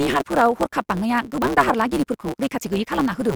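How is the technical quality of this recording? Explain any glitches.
The quality is impaired by one fault that runs through the whole clip. A block size mismatch (truncated) means one stage writes longer blocks than the next reads, so each block's tail is dropped, which fits a 512-sample written block. This produces a steady 138 Hz buzz and speech running 1.6 times fast at roughly normal pitch.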